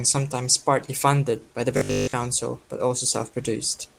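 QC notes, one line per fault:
1.77 to 2.13 s, robotic sound from repeated short buffers: right after "partly funded by the", the speech collapses into a rigid, metallic buzz at 50 Hz that still loosely tracks the syllables. The likely cause is audio arriving too seldom, with most of the gap filled by looping the last chunk. A 50 Hz buzz fits a 20 ms repeat. Opus's own low-bitrate roughness would spread across the clip, but this buzz is confined to this one stretch and has a fixed pitch.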